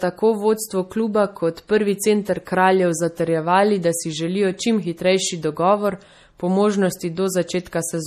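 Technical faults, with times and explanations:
Throughout, MP3 compression: the speech has a plainly audible watery, swirling quality, with metallic chirps on s sounds and smeared consonant onsets. Nothing is left above 15 kHz. This is likely a lossy MP3 encode starved of bits, which fits a low bitrate of around 40 kbps. The encoder cut the treble at a fixed point and dropped weak frequency components that flicker on and off from frame to frame.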